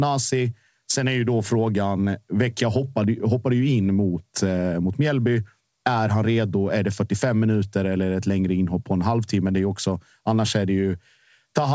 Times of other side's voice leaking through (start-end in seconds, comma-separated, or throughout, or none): none